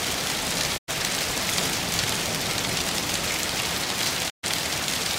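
The audio fades out over about 20 ms and goes silent from 0.76 to 0.90 s and again from 4.28 to 4.45 s. These are digital broadcast dropouts: the receiver muted while frames were lost, which fits roughly three and then four missing frames.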